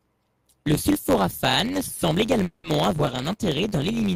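Right from the start there's a block size mismatch (truncated) running through the whole clip. One stage writes longer blocks than the next one reads, and the tail of each block gets dropped. That gives a steady buzz around 92 Hz, with the speech hurried to about 1.07 times normal speed, which fits a 512-sample write block.

From 2.43 to 2.67 s there's a call audio freeze. The last sound stretches out into a fading buzz or hiss for about 220 ms, then the speech carries on from where it left off with nothing lost. That's likely packets stalling on the way and the jitter buffer running dry.

At 2.98 to 3.01 s and again at 3.06 to 3.10 s you get short concealed packet loss. Around 40 ms of audio never made it each time. The receiver patched in a brief continuation of the previous sound, so each one comes across as a quick smear or wobble rather than a clean gap.

Starting at 2.98 s a call bitrate drop kicks in and lasts to the end. 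The encoder falls from 48 to 18 kbps and stays at the bottom for about 1.04 s. The speech turns rougher and more watery and loses some top end.

Finally, from 3.17 to 4.01 s there's a jitter buffer slow-down. The receiver repeats pitch periods to build its reserve back up, adding about 58 ms. Speech runs at roughly 94% speed at unchanged pitch, so sounds get drawn out.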